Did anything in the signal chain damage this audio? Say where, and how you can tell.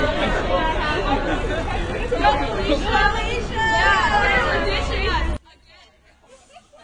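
Yes. At the codec stage, the audio was likely transcoded between lossy codecs, a low-rate AAC-LC encode re-encoded as HE-AAC. Throughout, nothing sounds above 16.4 kHz, and the first codec's artefacts are heard together with the second's.

In the analogue wiring or channel routing, one channel is inverted from 5.37 s to the end at 6.83 s, likely a polarity swap. In the mono sum the shared content cancels, dropping about 29 dB and leaving only a faint difference signal.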